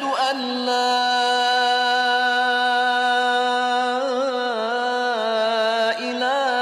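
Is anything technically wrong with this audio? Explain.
No, nothing is technically wrong with this audio. No working path is singled out for comment, and there are no faults to report.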